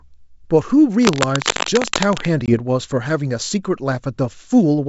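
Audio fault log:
1.02–2.27 s: cable scratch noise. Dense, irregular bursts of scratching and rustling sit over the speech at about the same level as the voice, likely from a worn cable or connector being moved. On a spectrogram they appear as ragged broadband smears; on the waveform, as spiky clusters.
2.46–2.56 s: packet loss on an ADPCM call. A 20 ms hole of silence, which fits a couple of lost packets, leaves the ADPCM decoder's predictor and step size out of step with the sender's. Speech resumes slightly distorted and briefly settles. The waveform shows a hard-edged flat gap and then the speech resuming, and the spectrogram shows a clean vertical blank.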